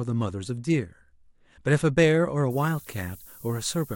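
From 2.50 s to the end of this speech clip, a thin, steady hiss rises strongly toward the top of the band. It is low bit depth with noise shaping. The signal drops to 8 bits there. The rounding error from those coarse steps is fed back and pushed up in frequency. That leaves the low and middle range cleaner but piles the noise into the treble. The hiss sits roughly 20 dB below the sound.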